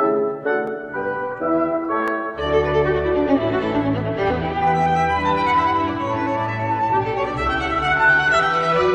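Sharp single clicks at 0.67 s and 2.08 s, likely dropped samples: a fraction of a millisecond goes missing, so the waveform jumps abruptly, leaving no audible gap, unlike a dropout.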